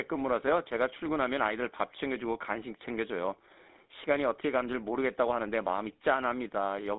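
Speech runs the whole clip through the GSM full-rate codec, giving a buzzy, gravelly roughness that fits the 13 kbps full-rate coder. On a spectrogram, energy sits in a band from about 250 Hz to 3.7 kHz with a hard ceiling above, and the harmonics look grainy and smeared.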